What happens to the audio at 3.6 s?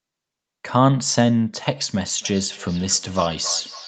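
At 3.6 s the speech is caught in feedback echo between two devices, running from 2.07 s to the end. A second device replays this microphone's sound and it is picked up again, returning about every third of a second, up to about 19 dB below the speech. Unlike room reverberation, these are distinct repeats at a fixed interval.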